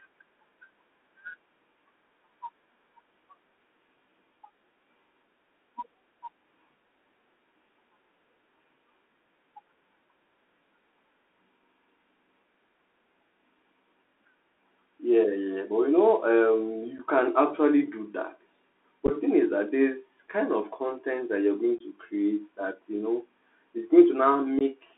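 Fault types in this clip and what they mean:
Bluetooth CVSD headset codec: narrowband one-bit delta coding confines the speech to roughly 250 Hz to 3.5 kHz, with plainly audible granular hiss and scratchy sibilants.
Unconcealed Bluetooth headset packet loss: lost voice packets leave abrupt holes, from a single brief dropout to a scattered cluster, each briefly quieter on return.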